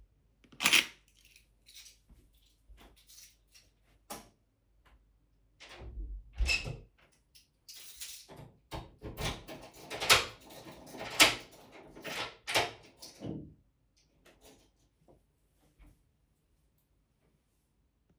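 Sounds make up the recording, and nothing technically wrong can be heard anywhere in it. No fault turns up at any point in the audio.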